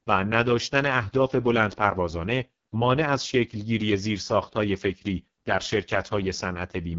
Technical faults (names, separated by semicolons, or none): AMR wideband (HD Voice) codec